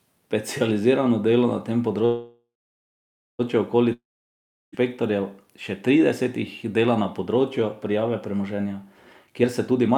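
A call audio freeze runs from 2.05 to 3.41 s, right after "dela na tem". The speech stops, the last sound trails off as a fading buzz, and about 0.9 s of near-silence follows. It then resumes exactly where it halted, with nothing lost, but now 1.34 s late. This is likely packets held up in transit that left the jitter buffer empty.

A long network dropout follows from 3.93 to 4.74 s. The last sound again fades out, and about 0.71 s of silence follows. When the speech returns, roughly 0.8 s of it is gone for good, most likely because that stretch of audio never reached the receiver.

A jitter buffer speed-up starts at 9.26 s and lasts until 9.94 s. The receiver, holding more buffered audio than it needed, cut many tiny pitch-period slices, removing about a fifth of a second in total. The speech plays at 128% speed with unchanged pitch and sounds rushed.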